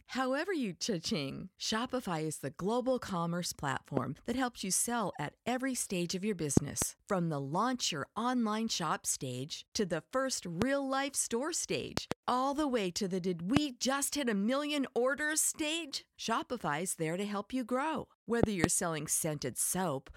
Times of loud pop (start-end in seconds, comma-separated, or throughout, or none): 3.97-3.99, 6.57-6.84, 10.62-10.64, 11.97-12.14, 13.57-13.59, 18.43-18.66